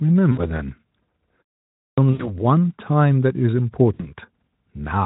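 VoIP packet loss concealed by the speech codec first appears at 0.31 to 0.39 s. About 60 ms of audio went missing, which fits three 20 ms frames. The decoder filled the gap by repeating its last pitch and filter settings at falling gain, so the speech smears into a short buzzy tone or coloured noise that fades. It then sounds weak for a moment as the decoder state recovers.

A clipped start after a pause follows at 1.68 to 1.98 s. After 0.33 s of silence, the output device needed time to wake and lock again. It swallowed roughly 0.3 s of the returning speech, so the speech resumes abruptly with its opening sounds gone.

The same packet-loss concealment returns at 2.11 to 2.37 s, covering about 80 ms or four frames, and again at 3.94 to 4.13 s, covering about 60 ms. Each time the speech stretches into a fading buzz or coloured noise and stays thin briefly afterwards.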